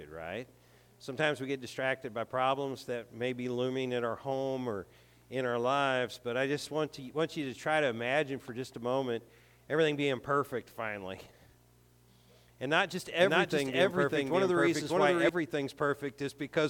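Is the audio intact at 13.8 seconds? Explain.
No. A doubled audio track runs from 13.19 to 15.29 s. A second copy, equally loud, trails about 0.7 s behind. It was likely captured again through a slower path.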